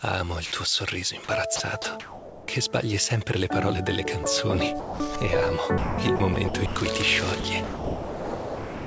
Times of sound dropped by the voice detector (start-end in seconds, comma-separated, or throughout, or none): 4.24-4.26, 4.80-5.00